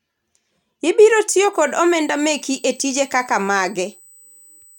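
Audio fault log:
1.53–4.78 s, USB whine: a steady, fixed-pitch 8 kHz whine enters at 1.53 s and holds to the end, sitting roughly 30 dB below the speech. It comes from the USB bus drawing current in 125 microsecond microframes, leaking through power or ground into the audio path.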